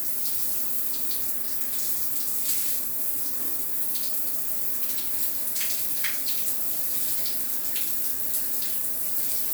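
No technical faults can be heard anywhere in this audio.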